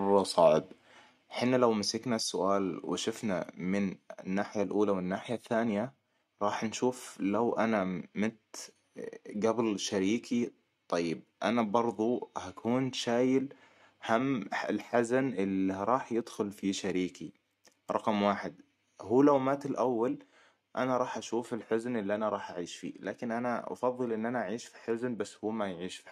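Between 0.43 and 0.48 s, a loud peak turns harsh and crackly. This is likely microphone overload. The input ran about 1 dB past the converter's limit, and a small share of the waveform tops were flattened.

At 1.02 s, just before "حنا لو", the level drops by about 3 dB. Another drop of about 2 dB follows at 2.04 s, after "حنا لو". At 19.38 s, between "رقم واحد هو لو" and "مات الأول انا راح", it falls about 3 dB. These sudden steps likely come from the microphone volume being stepped down by software reacting to the loud input.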